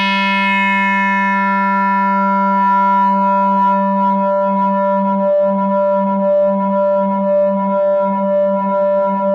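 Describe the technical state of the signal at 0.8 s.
The signal at 0.8 s is intact, with no audible fault at that moment.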